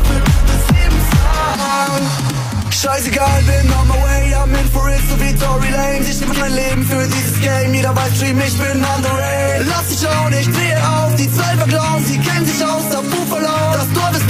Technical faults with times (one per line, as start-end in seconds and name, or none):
6.19-6.42 frames out of order